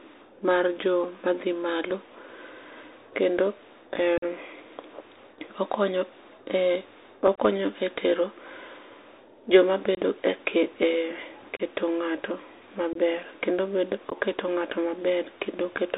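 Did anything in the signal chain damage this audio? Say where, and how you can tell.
Yes. The codec stage on the headset link damaged the whole clip: this is speech carried through the Bluetooth CVSD headset codec. Nothing reaches above 4 kHz, s sounds come out scratchy, and a granular hiss sits under the speech throughout. That hiss and the overload on loud, bright sounds fit a one-bit up/down delta stream near 64 kbps whose step size can't keep up. A plain low-pass filter would muffle the speech but leave it clean.

The network stage, the radio link between headset and phone, also failed. There is unconcealed Bluetooth headset packet loss at 4.18–4.24 s (45 ms lost), 7.35–7.38 s (22.5 ms), 9.95–9.98 s (22.5 ms), 11.57–11.61 s (30 ms), 12.93–12.97 s (22.5 ms) and 14.10–14.17 s (15 ms). Each hole has hard, abrupt edges, and the speech returns briefly quieter as the CVSD step size recovers. 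Each gap matches a few short voice packets being dropped. Concealed loss would smear or repeat sound across the gap instead of leaving silence.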